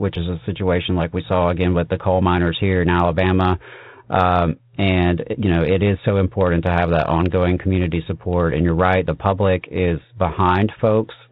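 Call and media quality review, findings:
Nothing stood out on listening; the speech comes through the G.726 path at 32 kbit/s with the narrow telephone bandwidth that coding gives.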